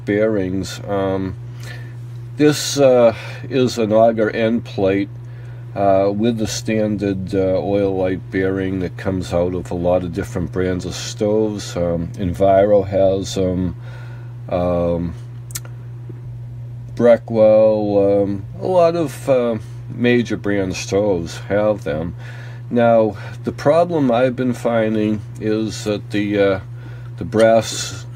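No technical faults can be heard anywhere in this audio.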